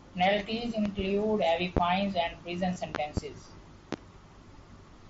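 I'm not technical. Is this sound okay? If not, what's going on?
No. There are loud pops in this speech, two between 0.86 and 1.02 s, one at 1.77 to 1.80 s just before "and prison", two between 2.95 and 3.20 s, and one at 3.93 to 3.96 s. Each is a sharp thump laid over the talking, which carries on underneath. A likely cause is a sudden electrical jolt, such as a loose plug, a switch or static.

There is also one tiny dropout, concealed Bluetooth headset packet loss, at 2.74 s, right after "and prison". About 15 ms of sound never arrived from the headset, and the phone filled the gap by repeating a bit of what came just before. Two packets were lost in a row.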